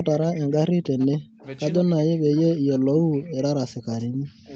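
Speech over a call path whose content stops at 8 kHz carries an echo leak at 0.1–0.55 s, 0.83–1.07 s and 1.39–1.46 s: a faint copy of the speech trails it by 188 ms, about 20 dB down, then about 30 dB down in the last scrap. On a spectrogram this appears as ghost harmonics offset to the right. The cause is likely an echo canceller that let loudspeaker pickup through. There is also speech suppressed in double talk from 1.07 to 1.44 s, roughly 150 ms in all, and again from 1.8 s to the end. The level drops by as much as about 40 dB, which shows as gouged, near-empty gaps in the waveform envelope, likely because the canceller ducked everything while both sides talked.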